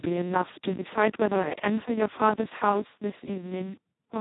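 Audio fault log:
throughout, Speex codec: the speech was squeezed through Speex at a rate so low it points to roughly 2 kbps, leaving almost no bits for the excitation, so the voice turns hoarse, buzzy and robotic, with nothing above about 3.8 kHz.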